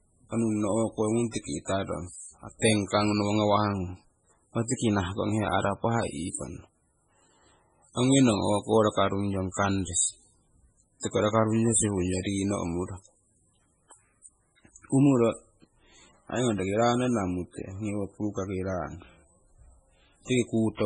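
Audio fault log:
Throughout, MP3 compression: the speech has heavy damage, with nothing above 10.2 kHz where the encoder cut the treble, and weak frequency lines drop in and out between frames, giving a watery, swirly texture. This likely comes from a starved bitrate near 16 kbps.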